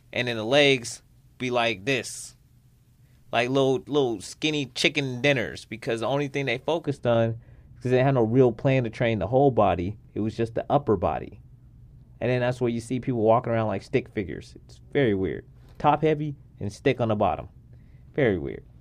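A treble-cutting de-emphasis filter is wrongly applied from 6.86 s, right after "the only thing they", until the end of the speech at 18.80 s. The filter undoes a high-frequency boost that the signal either never received or had already had removed, so the response slopes smoothly downward above the midrange, falling about 11 dB at 10 kHz relative to 1 kHz. Consonant edges and air are lost, and the voice turns dull and muffled for the rest of the clip.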